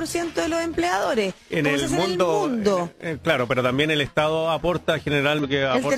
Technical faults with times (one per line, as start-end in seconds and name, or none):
5.39-5.45 damaged data in a compressed stream